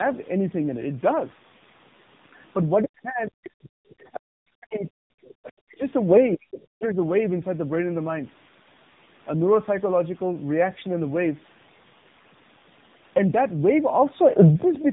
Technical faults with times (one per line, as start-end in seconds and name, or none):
0.00-14.93 tandem speech coding
3.89-4.19 other side's voice leaking through
3.96-5.25 speech suppressed in double talk
4.73-4.90 other side's voice leaking through
5.29-5.52 other side's voice leaking through
5.66-5.81 speech suppressed in double talk